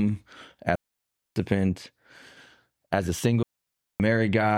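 At 0.75 s the speech drops into a clean, near-silent hole until 1.36 s, then again from 3.43 to 4.00 s. That's a digital wireless dropout: the link lost too much data, so the receiver muted with a quick fade, about 0.6 s each time, with no noise burst around either gap.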